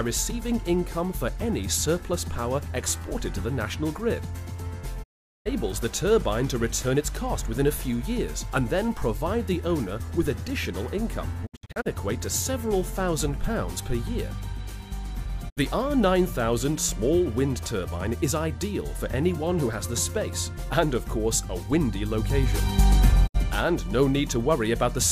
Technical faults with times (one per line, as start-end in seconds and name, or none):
5.02-5.47 digital broadcast dropout
11.45-11.87 digital broadcast dropout
15.48-15.59 digital broadcast dropout
23.26-23.36 digital broadcast dropout